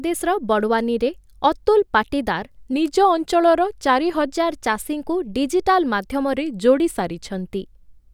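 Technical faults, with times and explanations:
2.73–4.28 s and 6.34–7.28 s: drift correction step. The speech slows by about 5.8% and drops roughly a semitone (−103 cents), then snaps back to normal rate. Speed and pitch move together, which is likely a clock-matching resampler refilling its buffer in one step.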